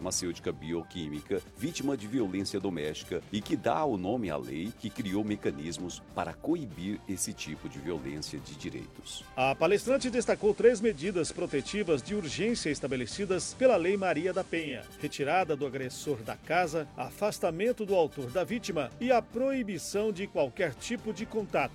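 From 9.68 s to 14.84 s the receiver performs a digital radio blend to analogue: the digital stream fails and, over a cross-fade of about a third of a second, the FM broadcast of the same station takes over before it blends back. The level shifts by about 2 dB, and hiss sits roughly 25 dB below the signal. That hiss and the smooth fade, not a hard cut, set it apart from a codec bandwidth drop.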